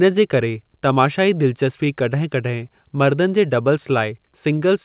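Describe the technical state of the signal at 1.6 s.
At 1.6 s you're in the middle of a stretch of repeated timing corrections that runs from about 0.1 s to 4.59 s. The receiver keeps patching the stream, mostly by repeating small slices, so playback runs at about 97% speed and the stretch gains something like 150 ms overall. Each patch is tiny, so you get a slightly uneven, dragging tempo with the odd faint hiccup rather than obvious glitches.

The root problem is clock drift between sender and receiver, and it's present for the whole clip. The sender's clock runs roughly 2% slow, so the jitter buffer keeps running short and the receiver has to pad the stream out. That's why the corrections are all in the same direction but land at irregular intervals instead of on a neat schedule. Underneath all that, the band still stops at 4 kHz, which is what you'd expect from a narrowband call codec.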